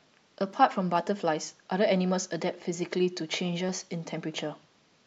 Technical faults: clock drift buffer slips

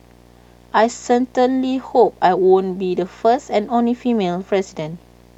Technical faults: video or display buzz

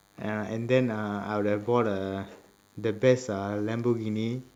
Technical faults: DECT cordless phone buzz

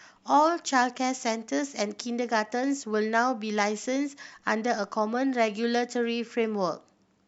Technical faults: none

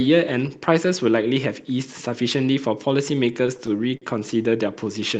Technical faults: repeated stalls (stutter)

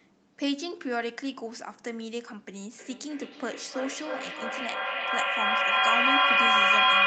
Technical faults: feedback echo between two devices

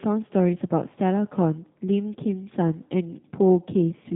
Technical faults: block size mismatch (truncated); G.729 codec

